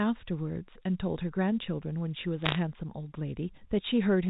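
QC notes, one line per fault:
2.42–2.56 s: bit errors on a digital phone line. A brief burst of sharp ticks and crackle sits over unchanged speech. Roughly one bit in a hundred is flipped in the G.711 stream, each flip corrupting one sample. Hits on sign or high bits produce the ticks.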